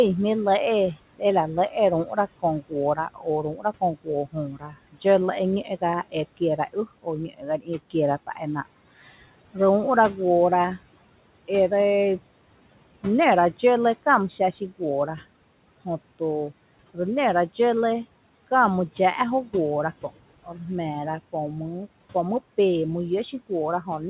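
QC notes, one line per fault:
0.94–1.22 s, 1.69–5.05 s, 5.64–7.95 s and 8.27–8.66 s: speech cut by the noise suppressor. The suppressor mistakes quiet parts of the speech for background and pulls them down with it. Dips reach about 19, 18, 17 and 10 dB. Affected stretches total roughly a tenth of a second, a second, half a second and a tenth of a second. Soft consonants and word endings sound swallowed or faint, over the light room noise.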